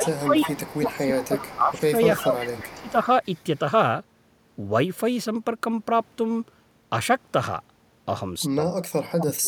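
From 0.0 to 2.97 s, the speech dips by about 15 dB for roughly two seconds. This is speech suppressed in double talk, likely the echo canceller ducking both sides. Overlapping it, from 0.04 to 1.81 s and again from 2.36 to 3.58 s, an echo leak trails the voice by 351 ms, about 15 dB down. A loudspeaker's echo likely got past cancellation. From 8.55 s to the end, double-talk suppression returns, cutting the speech by about 40 dB for roughly 0.7 s.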